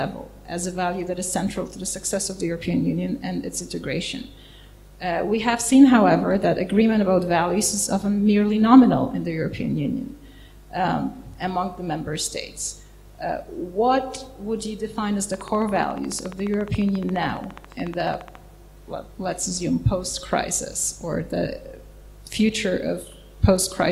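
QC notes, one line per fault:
15.34–18.36 s, train of clicks: for about three seconds a regular ticking rides over the audio at about 14.3 clicks per second, around forty near-identical pulses in all, with peaks roughly 5 dB above the surrounding sound. Because each impulse has much the same shape and the spacing is even, the ear hears a steady mechanical tick rather than random crackle. The cause is likely electrical interference from nearby equipment or a faulty connection or power supply injecting periodic pulses.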